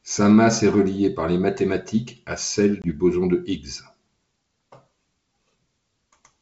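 At 2.82 s, just after "les mathématiques à celle", packet loss on the ADPCM call (G.722 at 64 kbit/s) leaves a hard-edged 20 ms silence, roughly one packet. Unlike a clean dropout, the speech returns with slight distortion until 2.91 s, before "boson de", because the decoder's predictor and step size have lost track of the sender's.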